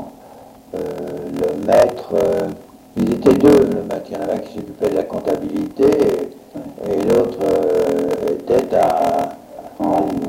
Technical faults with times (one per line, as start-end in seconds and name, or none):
0.00-10.29 block size mismatch (padded)